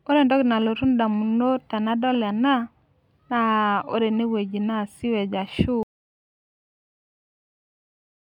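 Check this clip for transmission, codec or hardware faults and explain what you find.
An audio dropout to silence begins at 5.83 s and runs to the end of the clip. The speech stops mid-flow and gives way to silence with no room tone, most likely because the input was lost while recording continued.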